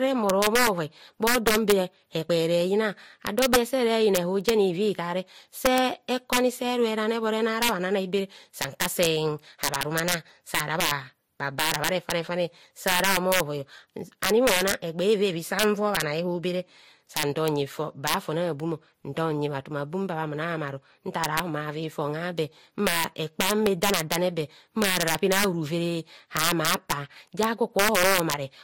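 Throughout the speech, loud peaks crack violently: integer overflow, where peaks pushed about 9 dB past the limit wrap to the opposite sign, far harsher than clipping's flattened distortion. A small fraction of samples is affected. Also throughout, nothing survives above 16.7 kHz, and two distinct sets of smeared, swirly artefacts sit on top of each other. This is likely transcoding between lossy codecs, consistent with low-rate Vorbis followed by MP3, rather than a single codec's artefacts.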